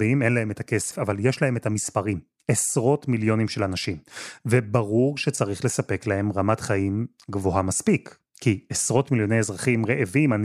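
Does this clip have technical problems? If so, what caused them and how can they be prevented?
Yes. At about 0.90 s the speech jumps forward and a short disturbance sits in the gap, lasting roughly 30 ms, to 0.93 s. That span matches about one MP3 frame of 26.1 ms. The likely cause is a broken MP3 bit reservoir. Frames were lost, so the next frame reached back for borrowed data and decoded bytes from the wrong frame. To prevent it, avoid cutting frames out of an MP3 stream, re-encode after editing, and keep every frame intact.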